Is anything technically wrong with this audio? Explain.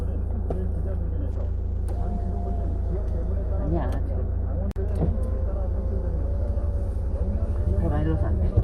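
Yes, two faults can be heard.

A call bitrate drop runs from 1.33 to 2.89 s: the encoder falls from 96 to 18 kbps, so the sound turns coarse and muffled, with highs cut.

A block of digital silence at 4.71 to 4.76 s leaves a 46 ms hole, which fits an unfilled 2048-sample buffer.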